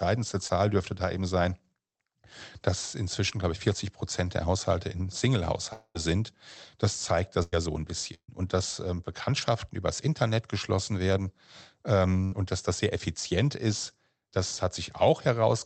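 At 0.47 to 0.51 s, short concealed packet loss replaces about 20 ms with a continuation of the preceding sound, heard as a brief smear and seen as a brief blurred column on the spectrogram.

From 5.73 to 5.97 s, about 220 ms is missing. The sound turns into a fading buzz or hiss and then roughly 50 ms of silence, most likely a long network dropout. The waveform shows a decaying envelope followed by a flat gap.

A burst of packet loss occurs at 7.43–7.54 s, 8.14–8.30 s and 12.24–12.34 s, removing about 100, 140 and 80 ms. Each is held as a fading buzz or hiss, and the second ends in about 70 ms of silence. On the spectrogram, each shows up as a smooth, stretched continuation that thins out before the audio resumes.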